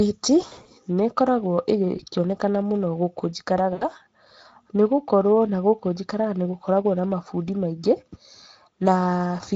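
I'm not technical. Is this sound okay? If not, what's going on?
No. Throughout, the speech has the Speex codec's grainy, plainly hoarse quality. That comes from an older internet-calling compressor that has too little data to rebuild the voice cleanly. Unlike muffled or echoey audio, the voice itself sounds rough.

There are also three brief breakups from VoIP packet loss concealed by the speech codec: 0.41 to 0.68 s, 1.97 to 2.02 s, and 3.73 to 3.85 s, just after "mũno gũkũ". Small pieces of the signal went missing, and the decoder filled the gaps by stretching the last sound into a buzzy or noisy, fading smear rather than leaving silence or a click.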